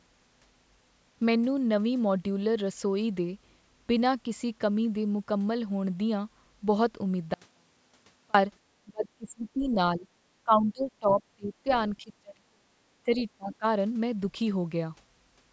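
Speech passed through call microphone processing, with nothing above 8 kHz. An audio dropout to a faint residue runs from 7.34 to 8.34 s: about 1.0 s of the signal vanishes abruptly and only faint sound about 40 dB down remains, likely a break upstream while the path after it stayed live. Speech is suppressed in double talk at 8.85–9.76, 9.96–10.07, 10.44–11.2, 11.36–11.69, 11.99–12.73, 13.03–13.2 and 13.37–13.65 s. The voice dips by about 10 to 40 dB in pieces, likely because the echo canceller could not separate this talker from the loudspeaker echo and turned both down. The other side's voice leaks through at 13.16–13.24 s, a brief scrap about 25 dB below the speech, likely loudspeaker echo the canceller failed to remove from the microphone.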